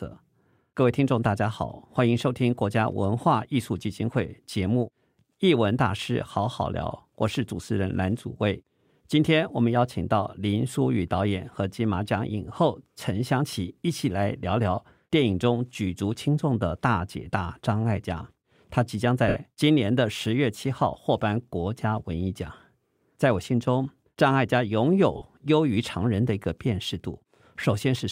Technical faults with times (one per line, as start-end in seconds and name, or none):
19.28-19.36 lost LE Audio frames
25.17-25.22 lost LE Audio frames